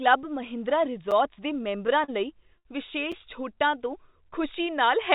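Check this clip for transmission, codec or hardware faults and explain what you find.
Three kinds of delivery fault appear in this speech, all interruptions in timing rather than lost sound. The band stops at 4 kHz, as expected from the G.711 mu-law call codec.

A gap between chunks occurs at 1.11 s and again at 3.12 s. Each is a hole of about 6.5 ms. The audio arrives in 2-second blocks, and a little silence sits at each join. It sounds like a brief hole in the sound.

Repeated stalls (stutter) run from 1.57 to 2.10 s. Packets kept arriving too slowly, and the jitter buffer emptied four times. The receiver stretched the last sound to cover 64 ms in total, the longest hold 38 ms. Nothing is dropped, but the speech drags and stumbles.

A short stall from a late packet follows at 2.58 to 2.67 s. One packet came about 69 ms late. The receiver held the preceding sound for those 69 ms, then resumed exactly where it left off. 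A sound lingers unnaturally long, with a faint buzz or dip.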